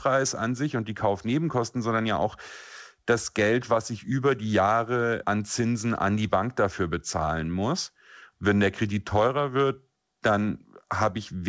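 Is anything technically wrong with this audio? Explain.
No, nothing is technically wrong with this audio.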